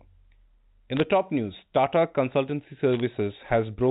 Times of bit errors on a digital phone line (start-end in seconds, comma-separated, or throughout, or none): 0.97-1.00, 2.93-3.00